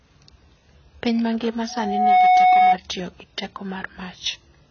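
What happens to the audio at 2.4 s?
At 2.4 s a loudspeaker feedback squeal is sounding. It runs from 1.69 s to 2.78 s and stops just before "tiyo gi teko". A microphone is picking up the loudspeaker it feeds, and at 737 Hz the loop gain exceeds one, so that single pitch grows on itself over about half a second until it sits roughly 10 dB above the speech. Its self-sustaining growth and fixed pitch set it apart from an added test tone, which would start at full level, or from hum, which would sit at a mains frequency and run throughout.

Across the whole speech, including this moment, the sound is dull and smeared, with a fizzy, warbling texture and nothing above 6.7 kHz. This is likely AAC compression at a very low rate, consistent with about 16 kbps. Quantising coarsely against a hearing model leaves spectral holes and a lowered cut-off. Plain low-pass filtering would give a clean, smooth dullness without that watery churn.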